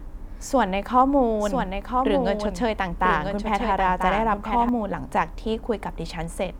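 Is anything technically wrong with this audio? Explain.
Yes, from 0.99 to 4.69 s there's a doubled audio track: a dry copy trails about a second behind, a few dB quieter, likely from a slower second capture path.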